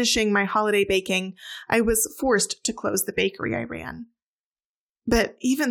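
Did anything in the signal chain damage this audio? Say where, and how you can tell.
Yes: one channel drops out from 2.89 to 2.94 s, between "I was forced to" and "the bakery I ran"; level dips about 6 dB, likely a momentary analogue wiring fault.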